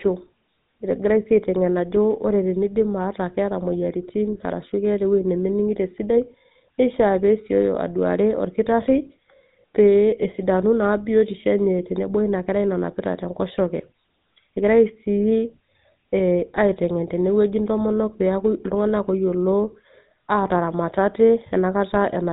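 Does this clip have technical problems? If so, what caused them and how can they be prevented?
Yes. Throughout the speech there is a buzzy, gravelly roughness, and the sound is dull, with nothing above about 3.8 kHz. This is the signature of the GSM full-rate codec. It imitates the vocal tract with a filter fed by a sparse train of regular pulses, discarding most of the excitation detail, and the damage here is plainly audible, which fits the 13 kbps full-rate mode. To prevent it, record or transfer the audio over a wideband path rather than through a GSM phone channel.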